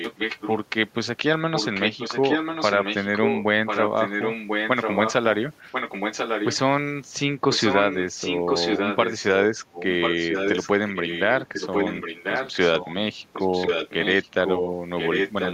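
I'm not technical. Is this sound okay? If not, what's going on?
No. There is an echo leak: a second copy of the speech trails the original by about one second, only a little quieter. It is heard at 0.00–0.57, 1.53–5.13, 5.72–6.57, 7.51–9.29, 9.73–12.94 and 13.33–15.54 s. The likely cause is a loudspeaker on the far end whose microphone picked the voice back up, and whose echo canceller failed to remove it before sending it back.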